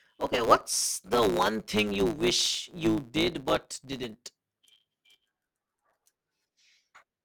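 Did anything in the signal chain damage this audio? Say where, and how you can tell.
Yes: a block size mismatch (truncated) at the buffer stage cuts each block's tail, giving a 109 Hz buzz throughout and speech running 1.09 times fast with its timbre kept.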